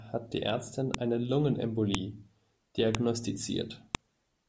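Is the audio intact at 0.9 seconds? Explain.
No, not quite. Right around 0.94 s there's a file header played as audio: a second piece of the stream was joined on without stripping its WAV header, so those header bytes play as samples, giving a sharp, loud click.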